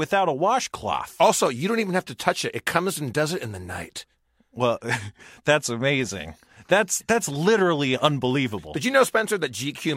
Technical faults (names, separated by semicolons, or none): clock slip clicks